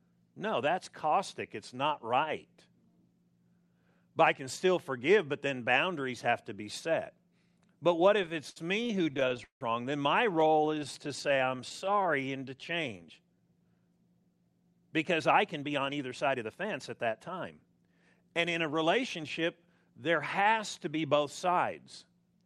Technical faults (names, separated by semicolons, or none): repeated stalls (stutter); jitter buffer slow-down; jitter buffer speed-up